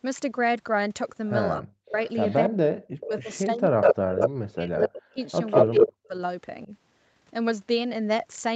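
Speech recording with two faults, both tied to a call with both sides talking. From 1.56 to 6.72 s the talker is suppressed in double talk. The level dips in pieces, by as much as about 40 dB, for around three seconds in total. The likely cause is an echo canceller that could not tell the near talker from the far side's echo and turned both down. An echo leak sits on top of this. From 2.1 to 2.35 s a faint delayed copy follows 276 ms behind, about 25 dB below the speech. From 3.0 to 4.88 s and again from 5.51 to 5.9 s a copy trails by 192 ms and is even louder than the speech, by about 5 dB. This is likely a loudspeaker echo that the far end's canceller failed to remove and sent back. Throughout, nothing is heard above 8 kHz, which is consistent with the Opus call path and its microphone filtering.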